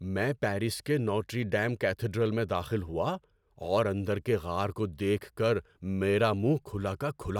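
No technical faults can be heard anywhere in this speech recording.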